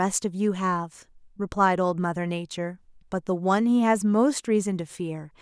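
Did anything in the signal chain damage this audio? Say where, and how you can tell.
No, nothing in the chain appears to have damaged this speech recording, and the signal shows no sign of degradation at any stage from capture to playback.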